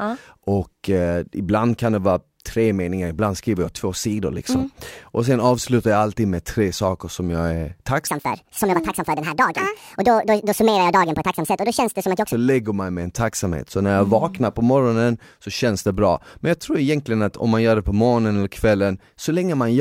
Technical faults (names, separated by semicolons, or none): section at the wrong speed